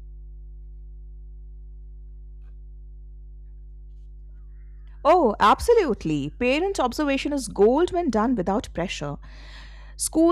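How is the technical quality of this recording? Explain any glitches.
The recording is compromised by mains hum running through the whole clip. A ground loop or a nearby transformer has let the 50 Hz power supply leak into the signal path, so the mains frequency rides along with everything that was captured. The result is a steady low drone at 50 Hz with some low harmonics above it, sitting roughly 20 dB below the speech. It stays constant under the talking and is most exposed in the pauses.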